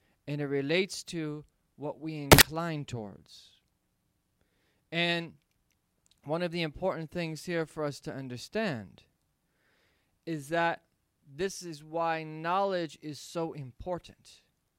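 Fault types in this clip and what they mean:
Samples built from the wrong bytes: for about 0.1 s around 2.32 to 2.41 s, the speech turns into a loud burst of harsh broadband noise, because each sample's bytes are assembled in the wrong order or offset. Unlike hiss or clipping, the noise swamps the signal rather than sitting under or distorting it.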